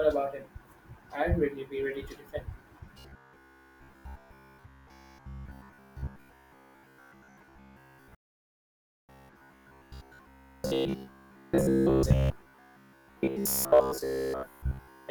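At 2.39 to 2.42 s, just after "really be ready to", compressed frames were skipped. The decoder never received or rejected a run of around seven frames, which fits 20 ms frames, so about 150 ms of speech is simply gone. The phrase lurches forward at the jump.

From 2.94 s to the end, the sound takes on a robotic quality from repeated short buffers. New audio reached the output too rarely, so the last slice was replayed to fill each gap, with most of the real material discarded. The repeat rate imposes a steady 66.7 Hz buzz, which fits a 15 ms buffer. The speech becomes a stiff, metallic drone that only loosely tracks the original.

Inside that stretch, two more skips of compressed frames occur. One is at 4.57 s and the other runs from 11.03 to 11.09 s. Each drops roughly four frames, about 70 ms, and is heard as another jump.

From 8.15 to 9.09 s there is a playback stall. The output falls silent for 0.94 s mid-flow, most likely because the player's data ran dry or its thread was held up. 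The audio then resumes.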